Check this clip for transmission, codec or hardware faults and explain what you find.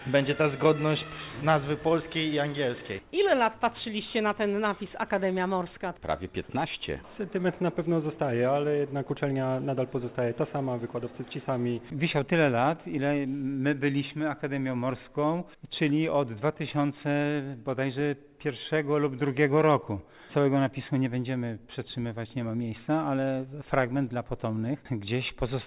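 No transmission, codec or hardware faults are audible here.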